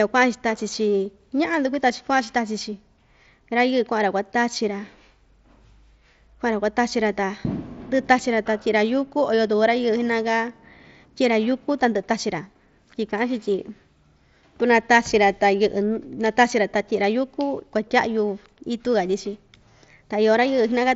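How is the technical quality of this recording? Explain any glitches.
One brief glitch occurs in the speech, heard through the 8 kHz band limit of an mSBC Bluetooth headset link. At 1.05 s there is concealed Bluetooth headset packet loss. A 7.5 ms gap, which points to a single dropped packet, was patched with a best-matching stretch of recent waveform, leaving only a faint, nearly hidden blip.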